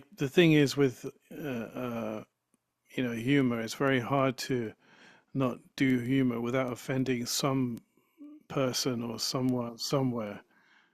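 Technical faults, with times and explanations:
0.13–10.9 s: word clock ticks. Short, sharp ticks recur at a steady rate of roughly seven per second, some 70 in all, over the speech. The receiver runs on its own clock, off by around 150 ppm, so a single sample is dropped or repeated at each slip.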